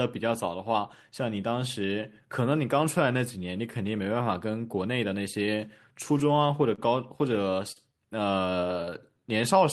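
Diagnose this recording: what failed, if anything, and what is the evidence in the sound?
Short stalls from a late packet at 6.75 to 6.81 s and 7.72 to 7.79 s, in the network and jitter-buffer stage. Each time a packet came late, the buffer emptied and the receiver held the last speech sound for 30 ms and then 42 ms, then resumed without losing anything.

Jitter buffer slow-down from 8.30 to 9.38 s. After those stalls the receiver rebuilt its reserve by repeating single pitch periods, adding about 76 ms. The speech plays at 94% speed at unchanged pitch, so syllables sound drawn out.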